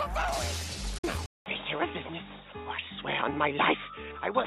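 From 0.98 to 1.04 s, a digital broadcast dropout fades out within 8 ms and leaves a 48 ms hole, which fits two lost frames; sound then returns. At 1.26 s, a 200 ms silence gives way to dull audio with nothing above 3.8 kHz, faint new noise, and a level shift of about 5 dB. This is likely an input switched to a poorer device, since the band stays narrow.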